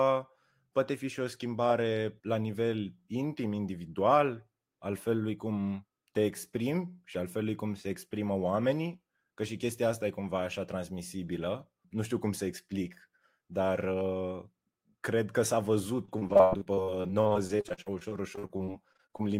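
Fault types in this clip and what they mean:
repeated packet loss (robotic sound): from 16.05 to 19.21 s the speech keeps losing brief pieces, the longest about 86 ms, each patched by extending the preceding sound. Roughly 29% of the stretch is filler. Unlike one isolated dropout, the holes recur densely, sounding choppy.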